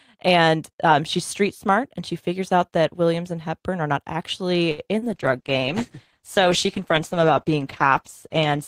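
Just after "are not actually", from 4.71 to 4.81 s, a sound is held too long with a slight buzz: a short stall from a late packet, with the last sound stretched for 67 ms. From 4.99 to 5.09 s there is a brief smear where 40 ms of speech is missing. This is short concealed packet loss, covered by about 33 ms of continued sound. From 5.14 s to the end, the speech turns rough and watery. This is a call bitrate drop from 48 to 13 kbps, held at its lowest for 3.11 s.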